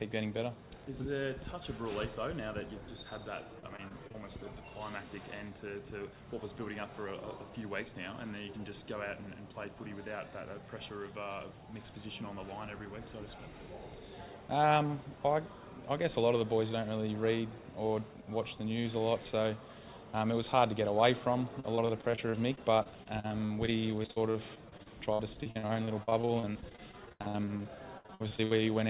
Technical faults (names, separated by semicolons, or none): repeated packet loss (robotic sound)